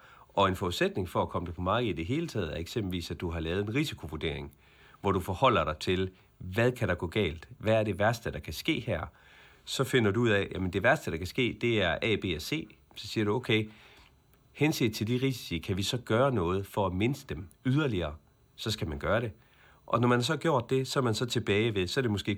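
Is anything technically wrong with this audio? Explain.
No, nothing is technically wrong with this audio.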